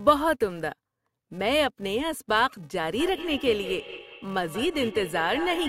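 From the very start and through the whole clip, a filter restarted on every block puts a steady buzz under the speech at 345 Hz. Because the filter forgets its state and begins each block from silence, every block boundary gets a small transient, and the rate fits a 128-sample block. The buzz rises and falls with the speech level. On a waveform this shows as evenly spaced tiny spikes. On a spectrogram it appears as faint vertical striations, with a harmonic comb based on 345 Hz that brightens wherever the speech is louder.

From 3.0 s to the end, feedback echo between two devices appears. A second device in the same room is playing back the call, and its sound is picked up again by the microphone. The first device's echo canceller removes only its own playback, so this copy gets through. The speech comes back roughly a fifth of a second late, at about 12 dB below the direct speech at its loudest. 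A spectrogram shows a fainter duplicate of each speech pattern shifted right by that interval, and the waveform shows smaller copies of each burst trailing the original.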